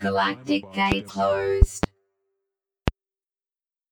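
A voltage spike or step, likely from a plug, switch, static discharge or driver glitch, is entering the signal path, putting loud pops on top of the sound, which continues underneath. Single pops fall at 0.92 to 0.95 s and 2.88 to 2.91 s, and a pair of pops spans 1.62 to 1.86 s, each roughly 20 to 25 dB above the surrounding audio. Separately, damaged data in the compressed stream makes the decoder lose frame sync between 1.06 and 1.10 s, producing a brief chirp or blip as it searches for the next valid frame.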